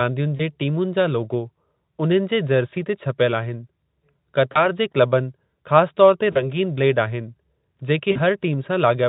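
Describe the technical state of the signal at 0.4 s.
At 0.4 s the sound sits inside a short stretch of VoIP packet loss concealed by the speech codec, running from about 0.37 to 0.41 s. A missing packet, which fits a single 20 ms frame, left the Speex decoder to guess, so it carried its last pitch and filter forward at falling gain. The gap is bridged by a brief buzzy tone or coloured noise that thins out, and the decoder's dependence on earlier frames keeps the sound weak for a moment after packets resume.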